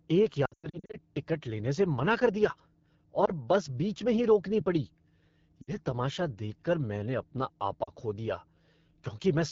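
The speech runs through the AMR wideband (HD Voice) codec at a rough, raspy quality that fits the low 8.85 kbit/s mode. Detail above 6.4 kHz is replaced by smeared noise up to a hard ceiling near 7 kHz, which shows clearly on a spectrogram.

Lost AMR speech frames first appear from 0.45 to 0.98 s, just before "टिकट लेने से मना". About 300 ms of audio drops out in patches over roughly half a second, with the longest run lasting 100 ms. Each time, the decoder repeats the last good pitch and vocal tract settings at falling gain, so the sound warbles and sags. On the spectrogram, harmonics stretch flat and fade, and the waveform envelope shrinks in dips. Brief dips follow at 3.25 to 3.30 s, at 5.62 to 5.73 s just before "तमाशा देखकर मैंने अपना", and at 7.83 to 7.91 s between "तमाशा देखकर मैंने अपना" and "खो दिया".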